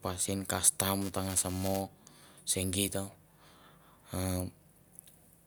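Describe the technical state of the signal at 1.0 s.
Buffer tearing runs from 1.01 to 1.82 s. Writer and reader have slipped, so a small sliver of each period, which fits a 128-sample buffer, holds audio roughly 7 ms old. It sounds like a robotic 375 Hz buzz, seen as hard steps in the waveform every 2.7 ms and as evenly spaced harmonic lines on the spectrogram.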